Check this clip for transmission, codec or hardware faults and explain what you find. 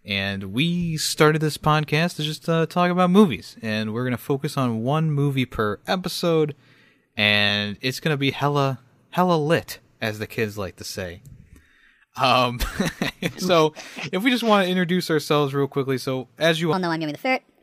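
One fault is audible. From 16.73 s to the end at 17.6 s there is a wrong sample rate. The speech runs 1.38 times too fast and about 5.6 semitones high, which fits 32 kHz material played at 44.1 kHz. On a spectrogram, harmonics and formants jump upward and syllables compress in time.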